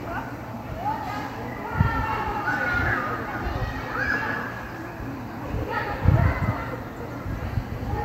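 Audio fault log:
Nothing to log here; the sound comes through without a single fault worth noting.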